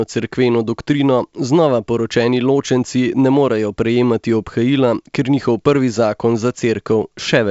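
Nothing goes wrong anywhere in this speech clip; it's simply carried over G.722 wideband telephone coding at 64 kbit/s, which keeps the sound open up to about 7 kHz with at most a faint touch of hiss in the upper band.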